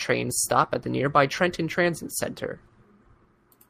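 No technical faults are audible anywhere in this speech recording.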